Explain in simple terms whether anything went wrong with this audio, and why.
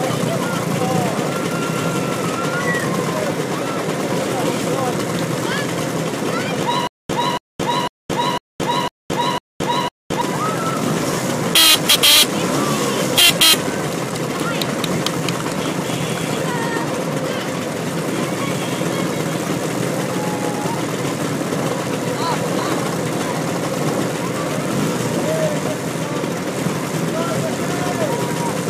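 From 6.87 to 10.22 s there is a stutter with silent gaps. A short 280 ms burst of sound repeats six times, with about 220 ms of dead silence after each. The player likely stalled and replayed its last fragment. The missing audio is lost.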